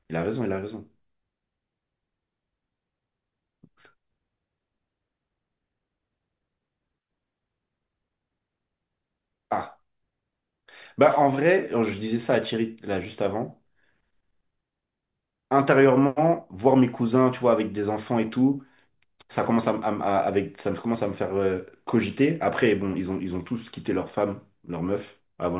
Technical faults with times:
none

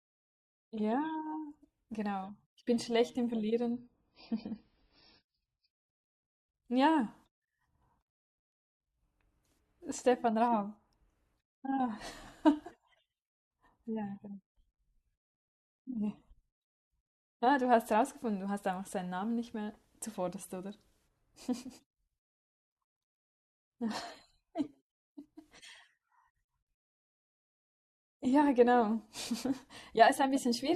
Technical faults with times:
3.72-5.72 adaptive stream at a lower bitrate

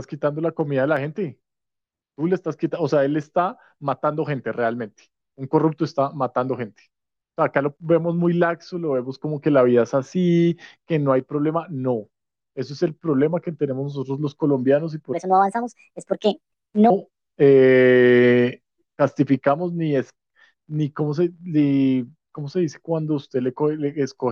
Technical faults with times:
15.13-16.90 section at the wrong speed

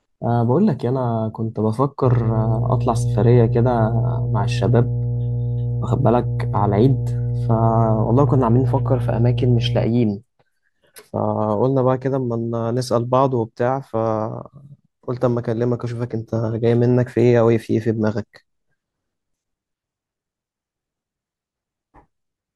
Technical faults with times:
2.03-9.89 mains hum

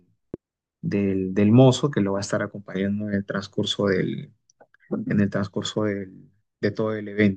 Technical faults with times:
0.34-0.36 loud pop

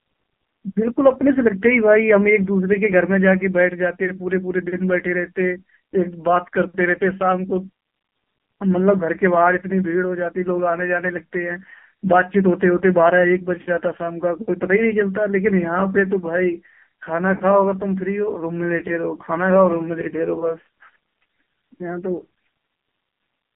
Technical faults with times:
0.00-23.55 AMR narrowband mobile codec

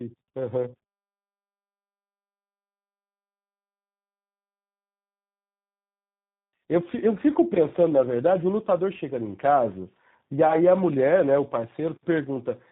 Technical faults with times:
0.00-12.71 tandem speech coding

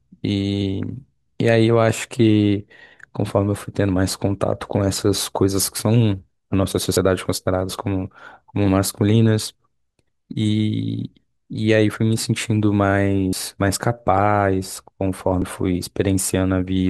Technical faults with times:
6.97 dropped buffer (overrun)
9.94 dropped buffer (overrun)
11.94 dropped buffer (overrun)
13.33 dropped buffer (overrun)
15.42 dropped buffer (overrun)

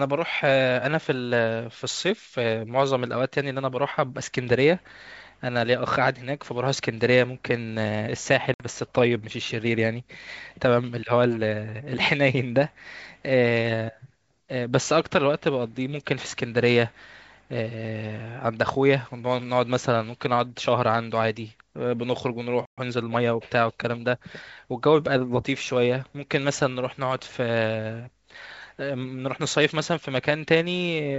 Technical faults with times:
8.54-8.65 packet loss on an ADPCM call
22.65-22.78 playback stall
22.78-23.26 time-compressed catch-up

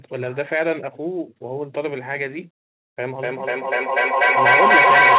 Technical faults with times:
3.19-5.19 feedback echo between two devices

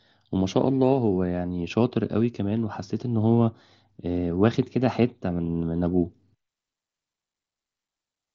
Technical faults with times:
5.78 concealed Bluetooth headset packet loss

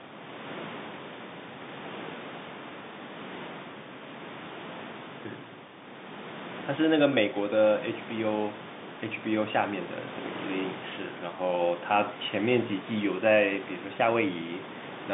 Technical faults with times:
none

